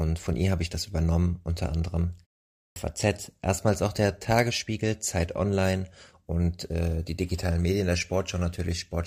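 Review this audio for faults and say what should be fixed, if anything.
Clipped start after a pause at 2.58 to 2.76 s: after "das übernommen unter anderem" and a 0.4 s gap, the output device has gone to sleep and needs about 181 ms to wake, so the next word bursts in without its opening sounds. To prevent it, keep the output stream active through silences or disable the device's idle power-saving mode so playback resumes instantly.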